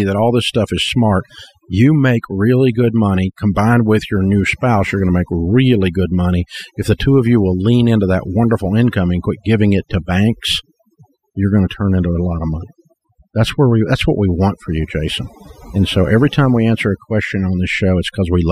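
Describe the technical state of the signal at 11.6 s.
At 11.6 s the speech carries overdone noise removal, present across the whole clip rather than at this moment alone. The noise reducer is set so aggressively that any frequency band sitting near its noise estimate is pushed down or switched off, and the softer parts of the voice get cut along with the noise. The background drops and breaks up into twinkling specks. On a spectrogram the gaps show as scattered isolated bright dots on a dark floor, with speech harmonics broken into patchy fragments.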